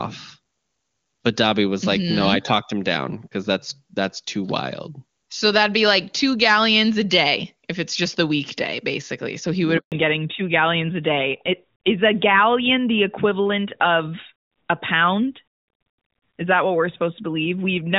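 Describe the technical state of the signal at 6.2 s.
At 6.2 s the speech is intact, with no fault present, the AMR wideband (HD Voice) codec at 23.85 kbit/s leaving at most faint coding traces.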